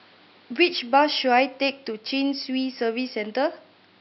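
Nothing stood out on listening to this speech clip, apart from faint room noise sitting about 34 dB below the speech.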